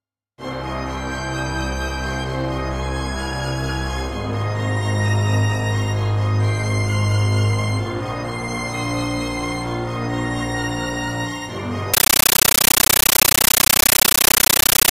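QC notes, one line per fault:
11.94–14.91 s, compressed stream played as audio: the everyday sound gives way to chattering static until the end. The link carried encoded frames, but the receiver treated them as plain PCM samples instead of decoding them. Each frame comes out as a 13.3 ms burst of noise followed by silent padding, repeating at 31.25 Hz. That burst-and-gap cycle causes the rattling texture, and the pattern fits a 640 kbps AC-3 stream.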